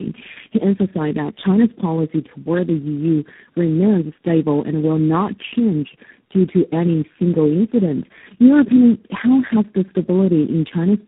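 Speech, with tandem speech coding throughout. The sound is rough, muffled and warbly, worse than any single low-rate codec would make it. Nothing reaches above 3.8 kHz, so this is narrowband telephone audio. The damage fits four speech coders in a row, something like GSM full rate, AMR-NB, G.729A and finally G.726, joined by G.711 links. Each coder re-codes the last one's already degraded output. The errors stack.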